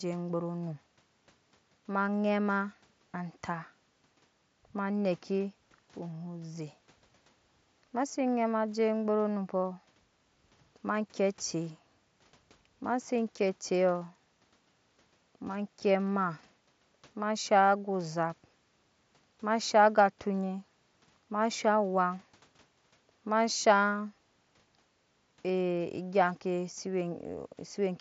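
No technical faults occur here.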